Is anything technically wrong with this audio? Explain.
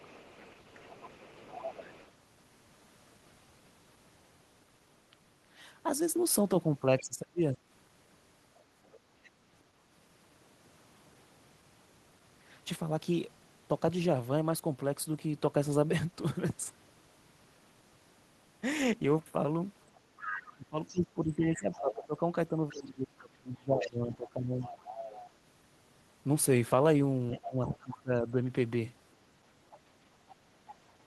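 Yes. There are two related problems, and both point to echo cancellation on the talker's end.

Other side's voice leaking through: the canceller likely failed to remove the loudspeaker's playback from the microphone. A second voice sits about 20 dB under the speech from 0.0 to 2.12 s and from 6.99 to 9.3 s. From 19.95 s to the end it rises to about 10 dB below.

Speech suppressed in double talk: with both sides talking, the canceller likely treated the talker's voice as echo and turned it down. At 6.99 to 7.62 s the voice drops by up to roughly 30 dB. Between 20.5 and 28.41 s it dips by up to roughly 20 dB, in pieces totalling around four seconds.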